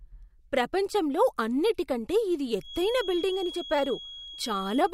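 The loudspeaker-to-microphone loop has likely drifted to the edge of feedback from 2.58 s, just after "ప్రపంచంలో అన్నిటికంటే ఇది". The result is a feedback whistle: a thin, steady 3.3 kHz tone, roughly 15 dB under the speech, that swells and fades slowly in level and lasts until the clip ends.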